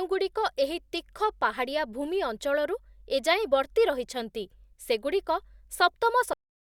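The speech stops abruptly at 6.33 s, in the middle of a sound, and falls straight to digital silence with no natural decay for the remaining 0.31 s. This is a cut-off end: the final buffers were never written or played back.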